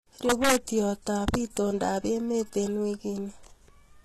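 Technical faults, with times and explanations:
Throughout: likely HE-AAC compression. The treble above 12.3 kHz is missing and s sounds are gritty and metallic from rebuilt upper bands, consistent with roughly 16 kbps.
0.29–0.56 s and 1.28–1.57 s (the latter just before "emet eng"): integer overflow. Peaks about 4 dB and 3 dB over the limit wrap to the opposite sign, producing violent cracks.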